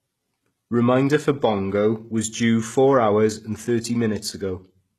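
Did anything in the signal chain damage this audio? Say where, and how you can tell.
Yes, at the codec stage, throughout the speech: the treble sounds gritty and lispy on s sounds, and stops dead at 12.3 kHz. That points to the likely cause, HE-AAC compression at a very low bitrate, which fits about 16 kbps. Spectral band replication copies the lower bands upward, so the highs are present but synthetic rather than simply cut off as with a plain low-pass.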